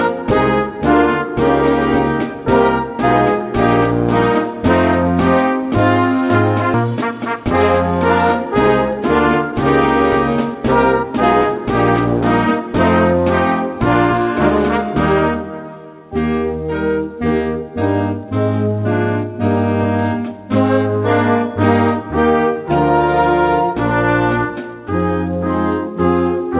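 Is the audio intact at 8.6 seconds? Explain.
No. At 8.6 s a jitter buffer speed-up runs from 8.35 to 9.02 s. Short pitch-period pieces are cut, removing roughly 40 ms, so the audio plays about 5% faster at the same pitch.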